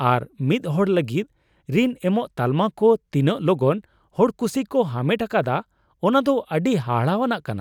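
Listening through the speech, nothing stood out as a technical problem at any point.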